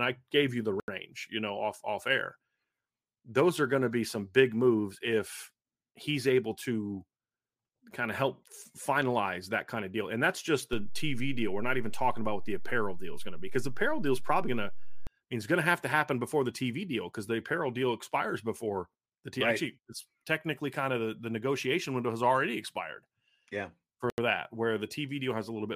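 Right after "I gave you the", at 0.80 s, there's a block of digital silence: 80 ms where the sound cuts out with no fade, a short hole before "you know off off" resumes. After "that's just" there's a DC step: the waveform's zero line jumps at 10.73 s and snaps back at 15.07 s, giving a low thump at each point, just before "it's going to have". At 24.10 s another 80 ms block of digital silence leaves a short hole right before "that where the".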